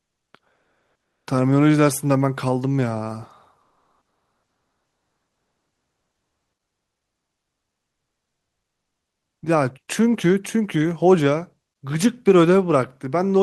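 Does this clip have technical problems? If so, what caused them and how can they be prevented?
Yes. From 0.55 to 1.27 s, comfort noise replaces the background with a steady, featureless hiss about 4 dB quieter. The likely cause is discontinuous transmission, such as Opus DTX, filling a pause. Disabling DTX at the sender prevents it.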